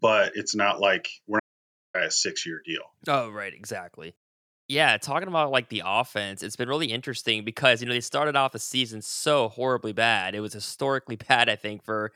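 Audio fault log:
1.40–1.94 s, audio dropout to silence: the input feed was likely lost, through a disconnected device, a failed link or an accidental mute, while recording carried on writing silence. The speech cuts off abruptly and about 0.55 s goes to dead silence, with no room tone, before resuming mid-flow.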